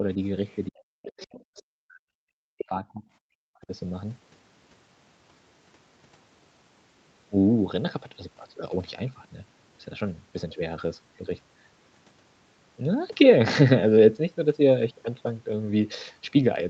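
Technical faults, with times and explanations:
0.48–0.56 s and 1.04–1.62 s, other side's voice leaking through: Likely an echo canceller that did not fully remove the far end's loudspeaker sound from the microphone. A second voice slips into the speech, very faint in the first brief scrap, about 35 dB down, then clearer for over half a second, about 20 dB below the talker.
0.69–3.03 s and 3.34–3.72 s, speech suppressed in double talk: With both sides talking at once, the echo canceller likely could not tell the talker from the loudspeaker echo and turned everything down. The talker's speech drops sharply, by as much as about 40 dB, affected for roughly two seconds in the first stretch and for nearly half a second in the second.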